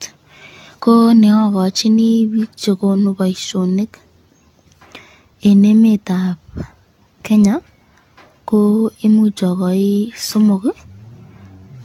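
The speech was likely decoded and re-encoded about ten times through a lossy codec, which fits AAC at around 96 kbit/s. This generation loss runs throughout. Each pass re-quantises the sound, leaving it swirly, hollow and smeared, with blurred attacks and nothing above 17 kHz.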